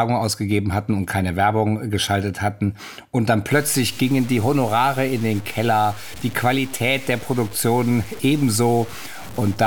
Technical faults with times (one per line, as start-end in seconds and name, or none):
3.52-9.66 low bit depth without dither